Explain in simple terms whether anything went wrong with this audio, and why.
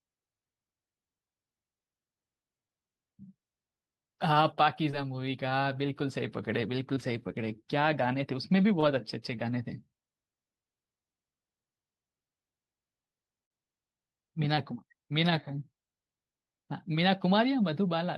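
Two brief moments of short concealed packet loss occur, at 6.94–6.98 s and 8.80–8.84 s. About 20 ms of speech never arrived in time each time, so the receiver patched the gap by extending the preceding sound, leaving a tiny smear or wobble.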